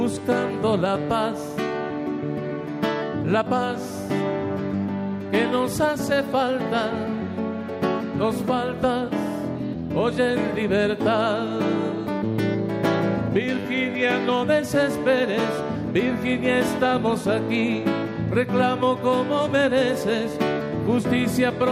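From about 0.12 s right through to 21.70 s there's a run of clock slip clicks, tiny one-sample jumps landing roughly every 30 ms. That's fast enough that they blur into a faint, soft rattle rather than separate ticks, around a thousand of them in all. The likely cause is two devices free-running on their own clocks, something like 700 ppm apart, so a sample gets dropped or doubled each time the drift adds up to a whole one.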